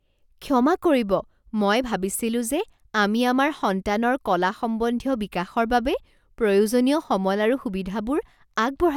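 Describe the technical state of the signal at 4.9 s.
At 4.9 s the speech signal is intact, with no dropout, click, distortion or other technical fault.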